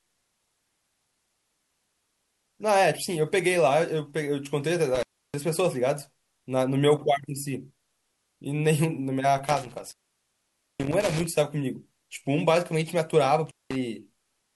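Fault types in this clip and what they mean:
Intermittent contact: a loose plug or cable connection briefly breaks the signal path, so the speech drops out with crackle at the make and break points and faint hiss while the line is open. It happens three times: at 4.95 to 5.34 s with about 310 ms open, at 9.46 to 11.26 s with the longest gap of about 870 ms, and at 13.46 to 13.75 s with about 190 ms open.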